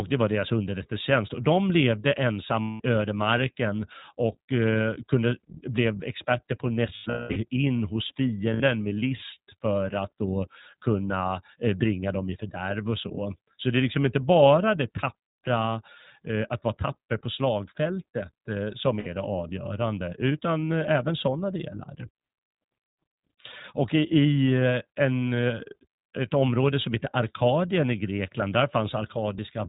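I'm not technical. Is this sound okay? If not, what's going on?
No. The speech was squeezed through the iLBC codec, a low-quality phone-call format that throws away everything above 4 kHz and rebuilds the voice in 20 ms pieces. Throughout, it sounds muffled, a bit rough and slightly robotic.

There are also lost iLBC frames: bits of the call never arrived, and the decoder filled each gap by repeating the last sound, giving a brief held, buzzy vowel. This happens from 2.64 to 2.81 s, between "de levde" and "ödemarken och eh kunde". It happens again, scattered from 6.96 to 7.37 s (the longest stretch about a fifth of a second), between "blev experter på att" and "in hos". There are shorter ones at 8.54 to 8.62 s, and at 19.00 to 19.08 s between "på slagfältet eh som" and "det avgörande utan".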